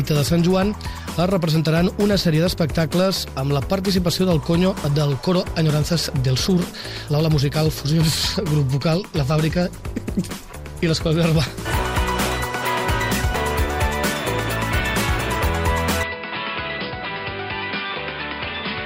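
From 16.03 s to the end the sound turns duller and quieter, with a new noise floor, as the input likely switched to a poorer device: spectrogram empty above 5.1 kHz, waveform visibly smaller.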